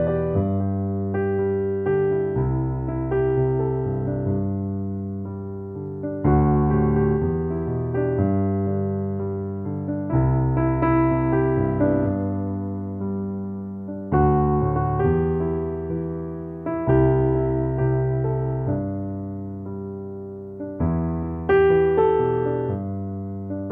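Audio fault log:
No faults detected in the clip.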